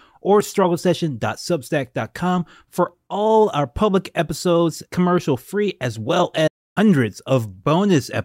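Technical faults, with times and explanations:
6.47–6.78 s, playback stall: the speech drops into silence for 286 ms, a held gap rather than a brief dropout click, likely from the player running short of data.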